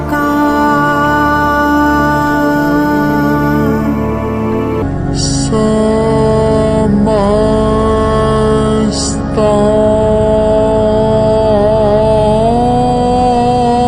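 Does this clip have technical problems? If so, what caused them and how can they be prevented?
Yes. A section at the wrong speed runs from 4.82 s to the end. Playback drops to 0.624 times the original rate, so the sound slows and falls by roughly seven semitones in one step. This is likely because that stretch was fitted to the wrong clock during editing or playback. Matching clock and sample-rate settings across recording, editing and playback prevents it.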